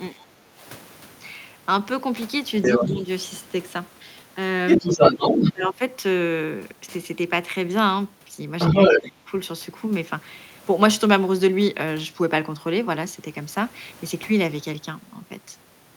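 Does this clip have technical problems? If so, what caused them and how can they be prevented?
Yes. Speech suppressed in double talk occurs at 0.13–0.61, 2.76–3.09, 4.78–5.21, 5.53–5.81 and 8.99–9.27 s. The speech dips and breaks into pieces. The drops range from slight to about 25 dB. The likely cause is an echo canceller turning down both sides while they overlap. Better double-talk detection in the echo canceller, or a headset, prevents it.

The other side's voice leaking through appears at 2.62–2.88, 4.68–5.53 and 8.59–9.10 s. This second voice is about as loud as the speech, sometimes a little louder. It is likely loudspeaker sound that the echo canceller failed to remove from the microphone. Headphones or a lower loudspeaker volume prevent it.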